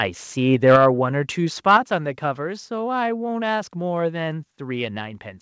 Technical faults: microphone overload; microphone volume stepped down

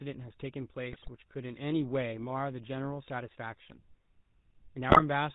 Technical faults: GSM full-rate codec; GSM bit errors

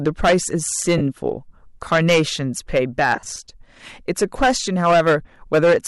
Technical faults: hard clipping; lost LE Audio frames

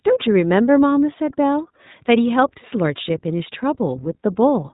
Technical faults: iLBC codec

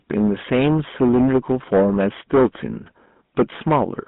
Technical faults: hard clipping; GSM full-rate codec

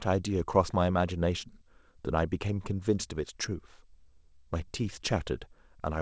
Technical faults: clock drift between sender and receiver; repeated timing corrections

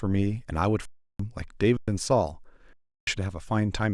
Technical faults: underrun with held sample

